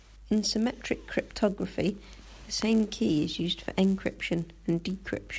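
Right from the start and all the way through, there's a low buzz riding on the speech at 100 Hz. That's the resampler restarted on every block. The 48 kHz to 16 kHz conversion was run on each 10 ms block separately, so each block edge was filtered against the wrong neighbouring samples and left a tiny error. With blocks that short, the errors fuse into a steady buzz that's there only while there's signal underneath.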